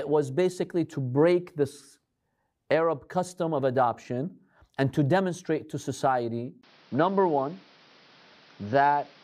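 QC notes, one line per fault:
6.61 s to end, input switched to a poorer device, likely. A gap of about 20 ms marks the switch. After it, nothing is heard above about 6.2 kHz, so the speech turns duller. A new noise floor sits about 30 dB below the signal. Loudness barely changes.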